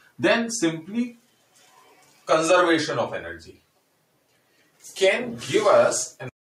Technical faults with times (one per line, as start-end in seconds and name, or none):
1.16-2.27 sound cut by the noise suppressor